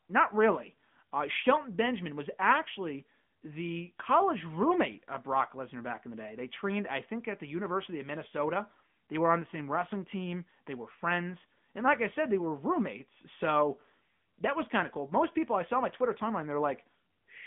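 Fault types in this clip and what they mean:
AMR narrowband mobile codec: The speech sounds thin and plainly buzzy, with nothing above 3.7 kHz and a band of 150 Hz to 3.5 kHz. The mobile coder rebuilds the voice from a vocal-tract model, and the damage fits a mode near 10 kbps.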